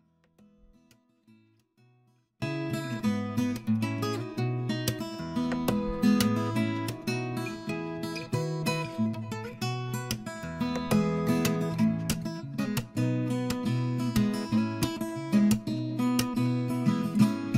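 The signal path likely lost its feed at the source while the stages after the break stayed live, so the clip opens with an audio dropout to a faint residue already under way. From the start to 2.42 s, all that comes through is a faint leak of the sound, about 35 dB below its normal level. At 2.42 s the full signal returns abruptly, with none of the gradual rise of a fade or a natural pause.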